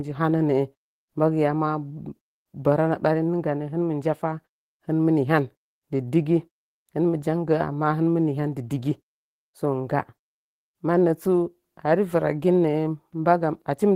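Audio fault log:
There is no fault to log in this speech audio.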